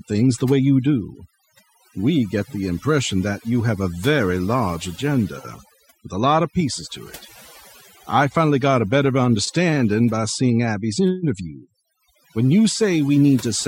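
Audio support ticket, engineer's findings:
Overdone noise removal, throughout: background dropped, breaking up into twinkling specks. Denoiser set too strong; quiet speech bands dropped with the noise estimate, unlike steady codec smearing.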